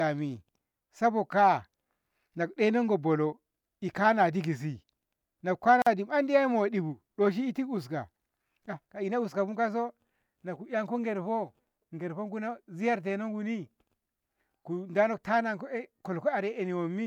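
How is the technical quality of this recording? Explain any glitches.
The recording has one glitch, a gap at a join of encoded pieces, at 5.82 to 5.87 s. The speech was encoded in separate segments and joined without trimming the encoder's leading delay and final-frame padding, leaving a gap of about 46 ms with smeared edges before the speech resumes where it stopped.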